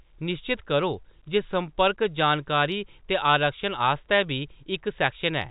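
Nothing goes wrong anywhere in the speech here; it simply carries the narrow telephone sound of G.711 coding, with nothing above 4 kHz and only a faint, level-following hiss sitting well beneath it.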